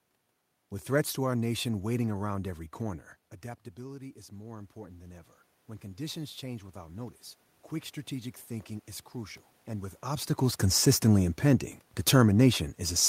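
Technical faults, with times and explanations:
3.75–7.24 s, automatic gain rising: The talker moved away near 3 s, and the level at the microphone fell by about 15 dB. The gain control then raised its gain by about 8 dB over three and a half seconds. Voice and room noise swell together.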